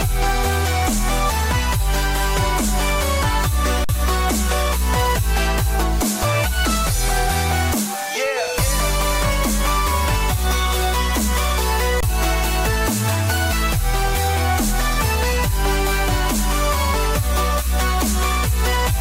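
At 3.84 s the sound freezes flat for about 46 ms, then again at 12.01 s for about 23 ms, while roughly 50 ms and 20 ms of audio go missing. This is an underrun with held sample: the output buffer emptied, fitting 2048- and 1024-sample blocks, and the converter held its last value until data returned.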